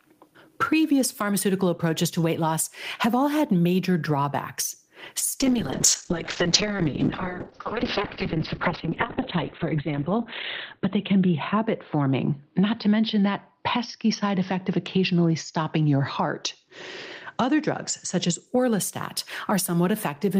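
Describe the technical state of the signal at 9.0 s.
At 9.0 s the speech sits inside a call bitrate drop running from 5.41 s to 18.52 s. The encoder falls from 32 to 9 kbps and bandwidth narrows from 20 kHz to 4 kHz, leaving the sound muffled and rough. Gain pumping is also present throughout: loud and soft parts are pulled closer in level and the sound is squashed, a swing of roughly 20 dB, likely from excessive gain driving a fast limiter.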